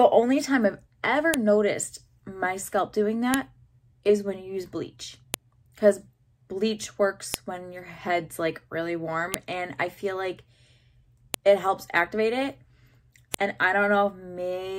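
The audio carries a sharp, loud click at 1.34, 3.34, 5.34, 7.34, 9.34, 11.34 and 13.34 s, repeating every 2 s regardless of the signal. This is a file header played as audio: 2-second WAV pieces were joined with their header bytes left in, which then play as a brief burst.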